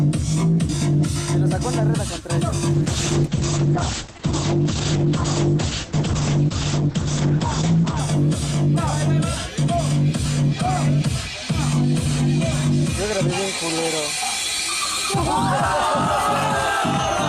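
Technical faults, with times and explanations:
2.74 to 8.05 s, call bitrate drop: the top end collapses, with the bandwidth shrinking from 20 kHz to about 8 kHz, and the sound gets rough and watery. That fits the encoder being pushed from something like 48 kbps down to around 9 kbps after the bandwidth estimate fell, so it codes coarsely and throws away the highs. It sits at that floor for about 5.25 s before the bitrate recovers.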